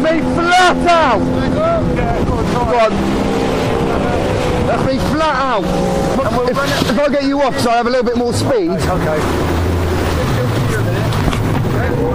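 No technical faults are audible anywhere in the recording.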